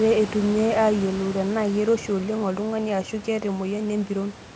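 No technical fault can be heard in the speech; the call's microphone processing leaves nothing above 8 kHz, and the room's background noise sits about 16 dB below the speech.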